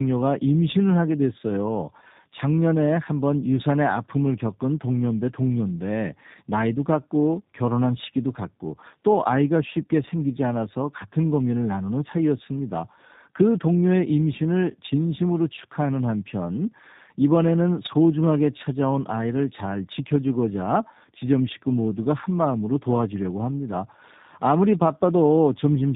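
Tandem speech coding runs throughout the clip. The speech went through two low-rate speech coders in a row: the sound points to an AMR-NB stage at about 10.2 kbit/s, then a G.711 link, then re-encoding in G.729A at 8 kbit/s. The second coder had to model the first one's errors as if they were speech, so the damage compounds. Nothing is present above 3.8 kHz, and the voice sounds rough, muffled and warbly.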